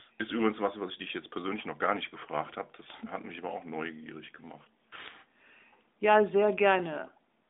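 Speech runs through the whole clip, carried over a narrow mobile-phone band of about 250 Hz to 3.7 kHz, with the light coding texture of AMR narrowband. The fault is word clock ticks. Sharp clicks of uneven strength start at 0.11 s and repeat about every tenth of a second until 7.46 s, around seventy in all. The receiving device runs on its own clock, off by roughly 200 ppm. Each slip drops or repeats a single sample, and that makes the tick.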